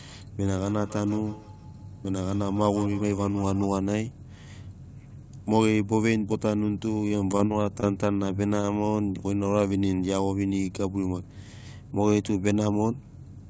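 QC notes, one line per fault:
0.47–3.74 s, feedback echo between two devices: The sound returns roughly every 150 ms, repeating in a thin, ringing tail up to about 18 dB below the speech. A second device in the room replays the call, and the first microphone picks it up again.
7.08–8.20 s, repeated packet loss (robotic sound): Short holes keep recurring, the longest 40 ms. Each is patched by stretching the previous sound, which gives a choppy texture. About 80 ms goes missing, and about 14% of this stretch is filled-in audio.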